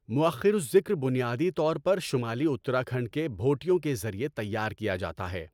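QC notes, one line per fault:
No faults found: no dropouts, clicks, distortion, level jumps or timing errors anywhere in the clip.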